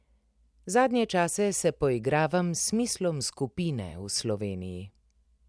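Speech recording with no audible technical faults.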